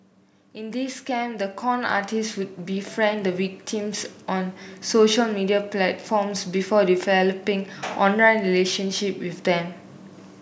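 From 0.54 s to 4.57 s the speech and the background noise beneath it swell together, climbing by about 12 dB over roughly four seconds rather than jumping. This is automatic gain rising: the automatic gain control judged the incoming level too quiet and kept turning its gain up gradually, so everything in the signal, not just the voice, gets louder at once. The call microphone processing also trims the lowest bass, as expected.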